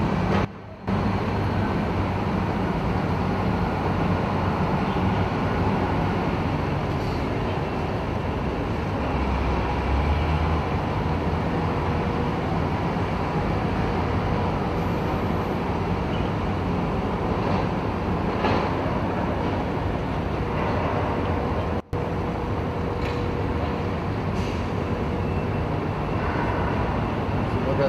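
At 0.45 s the level drops by about 16 dB until 0.88 s, then at 21.80 s by about 24 dB until 21.93 s. Each is a sudden gain jump, with sound and background noise stepping down together. It is likely digital gain switched without a ramp, leaving square-edged steps in the waveform and abrupt uniform dimming across the spectrogram.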